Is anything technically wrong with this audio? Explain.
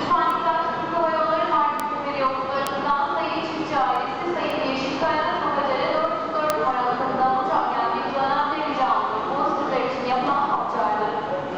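Yes, there are five bit error spikes, at 0.30, 1.80, 2.67, 4.50 and 6.50 s. Each is a flipped bit knocking a sample or so off by a power of two before it snaps back, giving a dry broadband tick that peaks around -17 or -5 dBFS.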